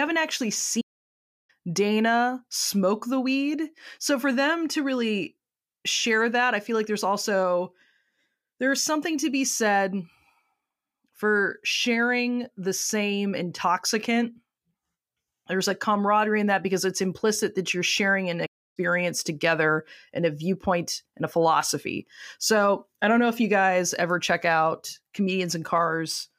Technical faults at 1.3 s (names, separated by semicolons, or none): playback stall